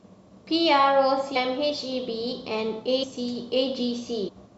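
At 1.35 s the speech jumps forward, losing roughly 400 ms, then again at 3.02 s and from 4.27 to 4.30 s, each losing about 150 ms. These are compressed frames skipped: blocks of coded audio never reached playback, so the timeline leaps by whole multiples of a 23.2 ms frame. Unlike a dropout, there is no silent gap, and unlike a hard cut there is no sharp click. Overlapping frames smear each join into a brief blip.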